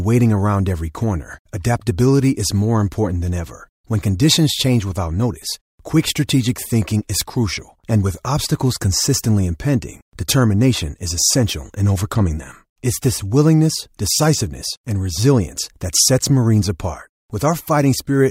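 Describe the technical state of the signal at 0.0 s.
At 0.0 s the signal is intact, with no audible technical fault.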